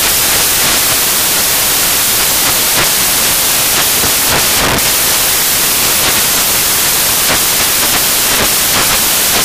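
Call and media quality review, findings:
Samples built from the wrong bytes, whole clip: loud broadband white noise, flat full-band spectrogram; byte order or alignment misread, low bits promoted.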